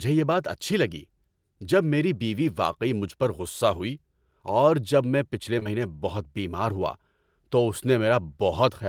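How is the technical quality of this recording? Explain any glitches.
The speech carries one fault, occurring twice in a row. Short concealed packet loss sits at 5.59–5.63 s and again at 5.63–5.67 s, between "جب میں پچھلے" and "بہت بیمار ہوا تو". Each time about 20 ms of audio arrived too late, and the receiver bridged the gap by extending the preceding sound before blending back, leaving a brief smeared wobble.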